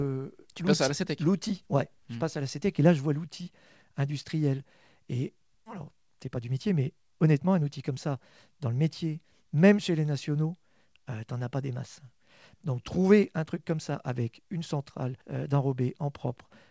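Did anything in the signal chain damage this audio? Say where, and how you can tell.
Yes. At 5.66 s there is a skip ahead: audio was dropped, either in transit or by the jitter buffer draining overflow, so roughly 0.7 s of speech vanishes and the two sides are spliced with no gap or fill. On a waveform the envelope changes abruptly at one point, and a spectrogram shows formant tracks breaking off and restarting mid-pattern with no silence between them. It sounds like part of a word or phrase has simply gone missing.

From 5.76 to 8.16 s the buffer, still holding more than its target, applied a jitter buffer speed-up, trimming pitch-period-sized chunks repeatedly to remove about 200 ms. Speech runs about 9% fast at unchanged pitch and sounds hurried. A spectrogram keeps harmonics at the same frequencies while syllables compress in time. The waveform shows slightly shortened voiced stretches with small period-boundary joins. 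The G.722 call path itself limits content to 8 kHz.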